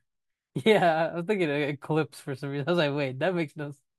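No technical faults are audible anywhere in the speech.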